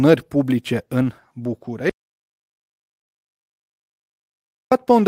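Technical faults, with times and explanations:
1.90 to 4.72 s, audio dropout to silence: the input was likely lost while silence kept being written, so speech cuts off into dead silence with no room tone.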